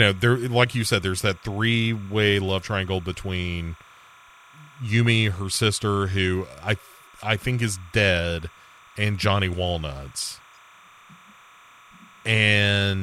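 Linear timecode has leaked into this speech recording from a neighbouring line. The timecode bleed is a faint, steady chirping warble near 1 and 2 kHz throughout, its rhythm fitting 29.97 fps code.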